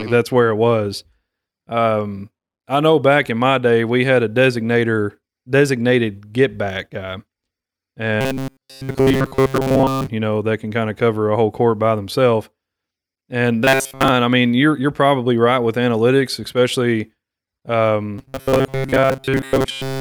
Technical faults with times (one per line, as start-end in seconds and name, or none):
8.21-10.08 robotic sound from repeated short buffers
13.64-14.08 robotic sound from repeated short buffers
18.18-20.00 robotic sound from repeated short buffers